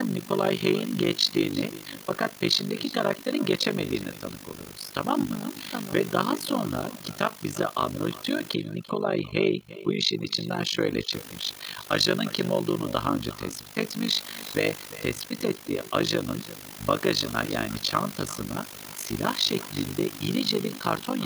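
A recording of speech is trailed throughout by a faint, hollow double of itself, arriving around a third of a second after each phrase and sitting about 18 dB under the direct sound. This is echo with no canceller: the far end is playing the call through a loudspeaker, its microphone is catching that playback, and nothing strips it out, so the talker's own audio returns after the network round trip as a thinner shadow. Running through the whole clip as well is a rapid, buzzy flutter, a rough robotic tremolo at around 50 pulses per second, with the level dipping very deeply, by about 60 dB, on each cycle. That is overlap-add ripple: the audio was split into windowed frames and rejoined with an overlap whose windows do not add up to a steady gain, so loudness swells and collapses once per frame, and the frame rate itself becomes audible as that fast modulation. From 8.54 to 11.13 s the background falls to an unnatural near-silence sprinkled with glittering specks. 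That stretch shows overdone noise removal, where a suppressor set too aggressively drives individual frequency bands down or off whenever they come close to its noise estimate and takes the quieter parts of the voice with them. The room noise it was working on, about 17 dB below the speech elsewhere, is ordinary background from the recording space and not itself a fault.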